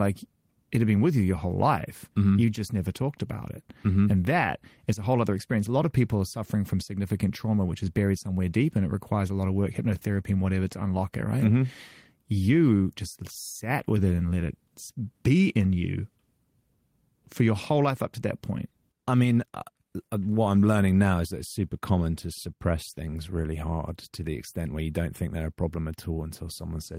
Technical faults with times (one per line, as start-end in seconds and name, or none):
none